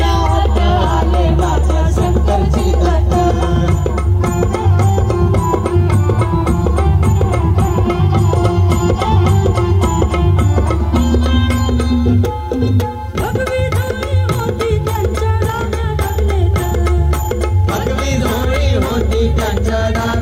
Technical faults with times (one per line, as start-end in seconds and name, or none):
0.00-20.22 low bit depth without dither